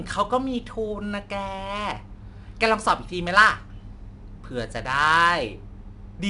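From start to finish the speech carries plainly audible 4-bit ADPCM compression. Each sample is coded as a coarse 4-bit step from a prediction, and the error becomes a gritty hiss that rises and falls with the speech level instead of sitting at a steady floor, which sets it apart from ordinary background noise. Nothing is heard above 10.6 kHz, which points to a sample rate near 22 kHz and a bitrate around 89 kbps.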